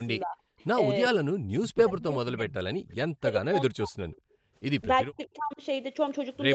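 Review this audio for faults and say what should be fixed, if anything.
Speech suppressed in double talk at 0.23–0.37 s, 1.12–3.99 s and 5.05–5.61 s: the speech dips by up to roughly 40 dB, likely because the echo canceller ducked both talkers at once. On a waveform the envelope collapses in patches. Prevent it with a canceller that keeps full-duplex speech through double talk.

Echo leak at 0.59–0.63 s, 1.97–2.95 s and 4.12–4.34 s: a faint copy of the speech trails 391 ms behind, at about 20 to 35 dB below it, likely residual loudspeaker echo. A spectrogram shows ghost harmonics shifted 391 ms later. Prevent it by improving echo cancellation or using a headset.

Background gated by the echo canceller at 4.27–4.53 s: the room sound drops by about 33 dB while the loudspeaker plays, then returns. It appears as a blank band in the spectrogram's noise floor. Prevent it with gentler residual-echo suppression or comfort noise.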